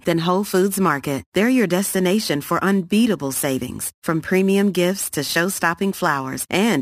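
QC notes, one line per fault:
0.40–6.81 s: crude rate conversion. From this point to the end, a gritty, inharmonic fizz rides on the speech. It sits roughly 20 dB below the speech. Samples were repeated or dropped to change the rate, with no filtering. The repeat pattern fits a step from 44.1 kHz to 48 kHz. That regular error creates shifted, inharmonic copies of the speech. They grow with loud and bright sounds, so the buzz tracks the speech.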